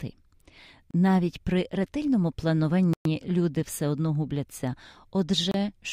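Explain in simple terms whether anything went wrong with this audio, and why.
Bluetooth stalls at 0.91–0.94 s, 2.93–3.05 s (just before "люди все одно губляться") and 5.51–5.54 s: the speech briefly drops to silence, likely because the headphones ran out of audio while waiting for delayed wireless data.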